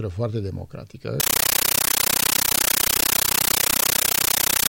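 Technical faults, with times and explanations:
1.2 s to the end: compressed stream played as audio. The sound becomes very loud, chattering static: 13.3 ms noise bursts, each followed by silent padding, repeating at 31.25 Hz. This points to an undecoded Dolby Digital frame stream being played as ordinary samples.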